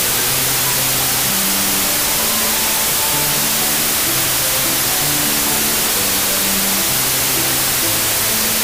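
From start to finish, the audio shows a wrong sample width fault. It sounds like 16-bit samples read back as packed 24-bit. Most values mix mismatched bytes, so loud noise dominates, with the original sound buried underneath, running 1.5 times fast and pitched up.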